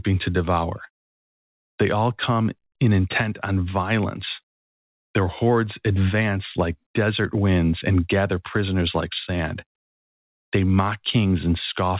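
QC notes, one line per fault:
No faults heard in this speech.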